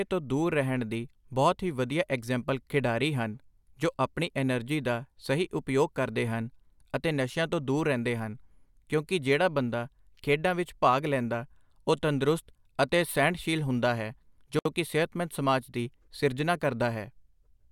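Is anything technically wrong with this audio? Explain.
Yes. There is a gap at a join of encoded pieces. At 14.59 s the speech stops for about 64 ms, resuming at 14.65 s. The speech was encoded in separate pieces and butted together untrimmed. The encoder's start-up delay and the padding on the last frame both remain as silence. You hear a brief hole with smeared edges. Then the speech carries on exactly where it left off.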